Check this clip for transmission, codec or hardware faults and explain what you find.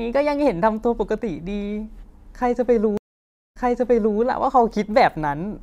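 One fault in this speech clip, a stream reconnect between 2.97 and 4.18 s. The audio drops into about 0.58 s of silence, then resumes roughly 0.63 s earlier than where it broke off, so a short stretch of speech is heard twice. The connection failed, the player reconnected and started a fresh decoder mid-stream, and the server resent a burst of audio from before the break, producing the repeat.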